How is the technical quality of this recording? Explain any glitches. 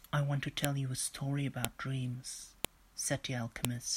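The quality is marred by a file header played as audio: roughly one-second WAV pieces were joined with headers intact, so header bytes produce sharp clicks at 0.65, 1.65, 2.65 and 3.65 s.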